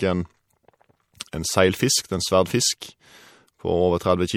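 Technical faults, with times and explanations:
Throughout, MP3 compression: the speech has a watery, swirling texture, with nothing above 19.1 kHz. This is likely MP3 coding at a low bitrate, around 64 kbps, where weak frequency lines drop in and out between frames as bits run short.
1.19, 1.32 and 2.80 s, pre-echo: short hiss just ahead of three sharp onsets, each lasting about 13 to 14 ms, softening the attacks. The codec spread quantisation noise across each block, so noise sized for the loud onset leaks into the quiet moment before it.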